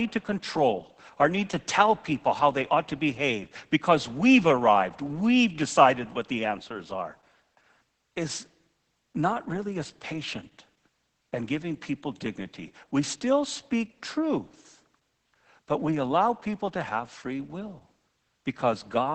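This speech clip carries Opus voice compression from start to finish, and the damage is heavy. Nothing is present above 8.7 kHz. The band has been narrowed to wideband. The voice sounds muffled, hoarse and a little robotic. That points to the SILK linear-prediction coder working alone and coding the excitation coarsely. Such strong artefacts fit a bitrate near 10 kbps.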